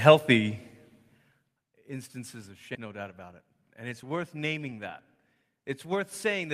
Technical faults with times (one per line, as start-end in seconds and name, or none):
2.75-2.77 skip ahead
2.85-6.53 jitter buffer speed-up